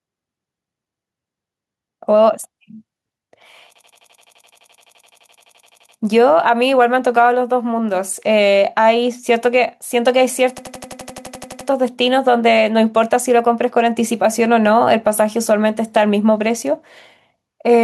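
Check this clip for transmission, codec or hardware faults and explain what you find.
Two faults are present: gain pumping across the whole recording and two system hang loops.

Gain pumping runs throughout the speech. The level swings by around 5 dB. The likely cause is input gain set far too high for the microphone, with a fast limiter or compressor clamping down on every peak. The result is a squashed dynamic range.

A system hang loop occurs from 3.76 to 5.97 s and again from 10.58 to 11.69 s. In each, one 85.33 ms slice of audio repeats exactly at 11.7 Hz, about 26 times in the first event and 13 in the second. This produces a rapid machine-gun stutter rather than a buzz. The loop length fits a 4096-sample buffer: the host or driver stalled while the audio hardware kept replaying the same ring-buffer segment.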